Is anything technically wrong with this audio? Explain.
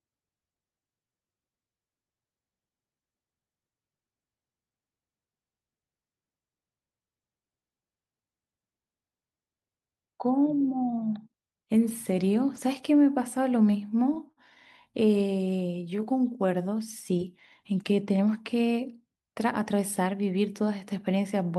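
Yes, the speech has jitter-buffer timing faults clustered between about 13.7 and 20.1 seconds.

Short stalls from late packets occur at 13.70–13.75, 14.14–14.19 and 14.32–14.40 s. The buffer ran dry, so the last sound was stretched by 19, 19 and 48 ms, causing brief held moments.

Repeated stalls (stutter) run from 14.93 to 15.48 s. Packets kept arriving late, causing five gaps totalling 44 ms, the longest 11 ms, so the speech drags and stutters.

A jitter buffer slow-down follows at 15.51–16.75 s. Repeated pitch periods add 107 ms, slowing the speech to 92% speed at unchanged pitch, with drawn-out sounds.

A jitter buffer speed-up at 19.01–20.14 s trims about 70 ms of pitch periods to shed excess delay, running speech at 107% speed and sounding hurried.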